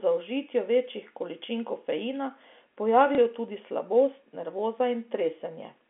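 At 3.15 s a packet of speech never arrived, and the receiver filled the 30 ms gap to 3.18 s by playing the previous packet again, which fits a single lost 30 ms packet. This is packet loss with the last packet repeated. The sound briefly catches in a small blip, heard within the narrow telephone band of the G.711 line.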